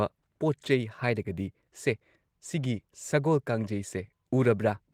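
There are no technical faults to describe in time order in this speech clip.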